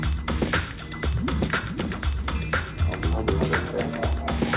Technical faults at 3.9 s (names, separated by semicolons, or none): none